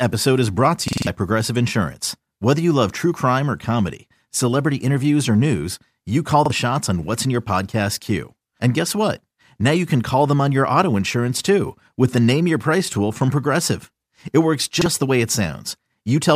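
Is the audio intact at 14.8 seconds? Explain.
No. A repeated buffer occurs from 14.81 to 14.86 s, just before "the way it". New audio did not reach the output in time, so the device played the previous 46 ms block once more, a length that fits a 2048-sample buffer. It is heard as a brief stutter, and about 50 ms of speech is skipped. On a waveform the same 46 ms shape appears twice, joined by an abrupt seam. A spectrogram shows a duplicated slice edged by thin vertical broadband lines.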